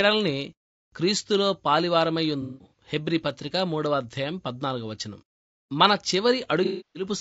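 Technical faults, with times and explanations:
Throughout: low-delay AAC compression. The speech has a rough, grainy texture, with noise filling the gaps between the pitch harmonics and a thin, somewhat synthetic top band. This is likely the low-delay AAC-ELD codec used for video calls, and the level of damage fits a bitrate around 32 kbps. Its frames, about 30 ms each, code about 500 frequency lines, and at this low bitrate the bit budget runs out, so the fine detail is lost.
2.42–2.83 s and 6.65–7.06 s: AAC frame loss with concealment. In both places the decoder lost coded frames and filled the gaps from the last good spectrum, which produces smeared, noisy, phasey patches. The first event totals about 240 ms of missing audio spread across 300 ms, with the longest unbroken gap near a fifth of a second. The second is a 300 ms loss.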